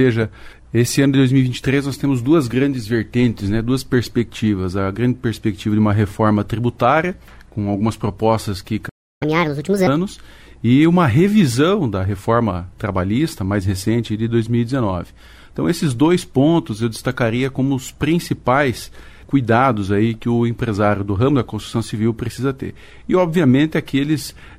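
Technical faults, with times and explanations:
8.88–9.23 s, playback stall: the player likely ran out of data or had its thread blocked, so the output cut to silence for 0.32 s mid-flow.
9.23–9.87 s, catch-up at higher speed: the player resampled its backlog at 1.5 times speed to win back lost time, pushing the pitch up by around seven semitones.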